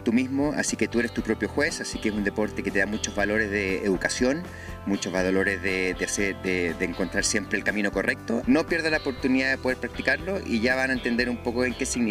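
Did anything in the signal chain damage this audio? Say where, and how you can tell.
No, nothing in the chain audibly damaged this audio.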